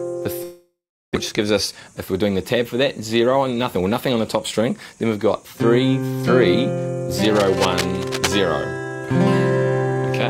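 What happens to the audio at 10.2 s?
Nothing goes wrong at 10.2 s; the audio plays through that moment intact, with no dropout, click or other fault.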